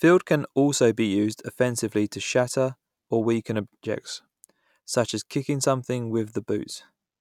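A speech clip, and right after "to shatter or weaken" there's a drift correction step: from about 3.95 to 4.49 s the playback slows by roughly 5.9%, dropping pitch about a semitone (around 105 cents), then snaps back just before "such as kicking something". Speed and pitch moving together like that is likely clock-matching software stretching playback in one jump to rebalance its buffer.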